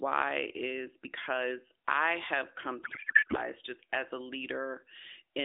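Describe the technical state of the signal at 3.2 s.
At 3.2 s there is a codec payload misread. It runs from 2.84 to 3.37 s, between "because I have come" and "just as a". The AMR frames were packed octet-aligned but unpacked as bandwidth-efficient. Every field lands wrongly, so the speech becomes garbled, warbling noise that barely follows it.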